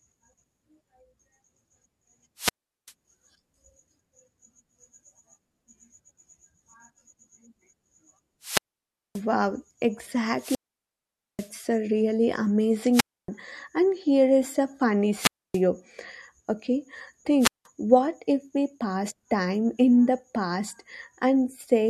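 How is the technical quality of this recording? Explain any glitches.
The speech is repeatedly broken by wireless microphone squelch dropouts, six in all. They occur at 2.37–2.92 s, 8.41–9.22 s, 10.37–11.51 s (ending just before "a really"), 12.92–13.29 s, 15.15–15.61 s (just after "here is a funny"), and 17.39–17.66 s (just before "what if we pass"). Each time the radio link fades, hiss rises briefly, and the receiver's squelch mutes the output. The silent holes last from about 0.18 s to 0.84 s, the longest at 10.4 s.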